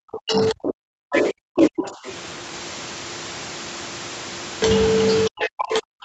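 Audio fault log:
0.0–2.06 s and 5.26–6.04 s, speech suppressed in double talk: The talker's level sinks hard, by about 40 dB at its deepest. The first stretch covers the opening two seconds. The second runs to the end. Both sides are likely talking at once here. The echo canceller cannot tell the talker from its own loudspeaker echo, so it turns everything down. The call path's band limit near 8 kHz stays in place throughout.
1.14–1.22 s, 1.84–2.12 s and 5.41–5.64 s, other side's voice leaking through: A second voice slips into the microphone signal in short scraps. The first and last scraps sit roughly 10 dB below the talker. The middle one is fainter, about 20 dB down. This is likely loudspeaker playback of the far end that the echo canceller failed to remove. Each scrap falls inside or just after a suppressed stretch.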